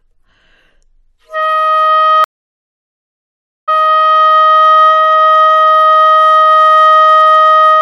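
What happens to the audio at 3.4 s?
A stream reconnect runs from 2.24 to 4.23 s. The connection dropped, leaving 1.44 s of silence. A fresh decoder resumes the sound 0.56 s earlier, repeating it.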